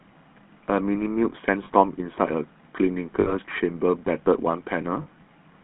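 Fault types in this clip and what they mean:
GSM full-rate codec: The speech has passed through the old GSM full-rate coder, which rebuilds the vocal tract from a coarse model driven by sparse regular pulses. Here that gives a plainly audible buzzy, gravelly roughness, with the sound confined to a narrow telephone band with nothing above about 3.4 kHz.
Lost GSM frames: Some coded frames failed to arrive, and the decoder covered each gap by repeating the last good frame. This leaves brief rough, metallic rings in place of the speech, lasting 40 ms at 1.64 s and 5.02 s and 60 ms at 3.20 s.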